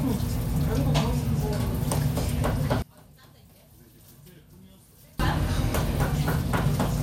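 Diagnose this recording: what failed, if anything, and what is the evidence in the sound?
The polarity of one stereo channel was likely reversed somewhere in the wiring or routing ahead of a mono fold-down, a fault known as one channel inverted. From 2.82 s to 5.20 s the sound collapses by about 27 dB, with nearly all of it gone, leaving only a faint residue. Summing two nearly identical channels when one is flipped cancels everything they share, so only their small differences survive until normal polarity returns.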